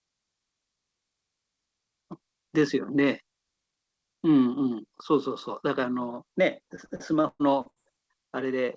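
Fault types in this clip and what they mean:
Repeated packet loss (robotic sound): packets kept going missing or arriving too late between about 6.76 and 7.78 s. Each hole was patched by stretching out the last bit of sound before the next hole arrived, seven gaps in all, the longest about 0.12 s, so roughly a third of that stretch is filled-in rather than real. The speech turns choppy there, with pieces dropped, heard through a call path whose band stops at 8 kHz.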